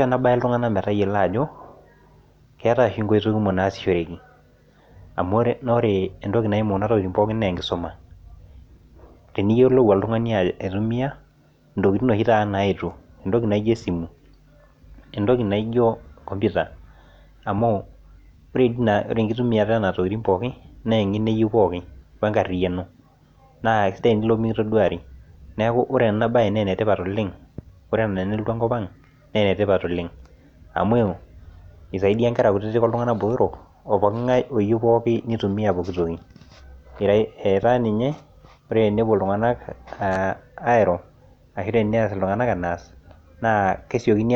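Nothing in this speech recording stands out as a technical fault, so there's nothing to flag along the way.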